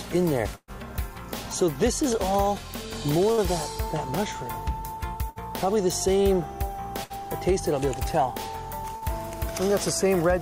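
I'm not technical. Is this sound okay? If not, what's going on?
No. There is a burst of packet loss at 0.55 to 0.71 s, and again at 3.32 to 3.41, 5.30 to 5.39, 7.04 to 7.13 and 8.96 to 9.05 s. The sound was sent in small pieces, and some arrived too late or not at all. The player stretched the last sound, fading it as a held buzz or hiss, then jumped ahead. The first gap is longest, about 0.12 s with a brief silence; the others last about 0.06 s.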